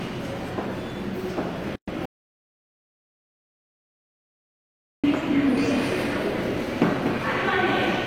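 At 1.76 s a gap at a join of encoded pieces opens: an about 119 ms gap, lasting to 1.88 s, with smeared edges before the sound resumes where it stopped. Two separately encoded sections were joined untrimmed, leaving encoder start delay and last-frame padding in place.

From 2.06 s to 5.04 s comes an audio dropout to silence, nearly 3 s of silence with no room tone. Whatever sounded in that span is missing. The likely cause is a lost input, such as a disconnected device, failed link or accidental mute, while recording continued.

From 5.58 s to the end, the audio is a doubled audio track. A second full-band copy trails the original by roughly 200 ms at around 5 dB lower, dry and uncoloured, and it enters abruptly. This likely comes from a slower second capture path or an edit holding two offset copies.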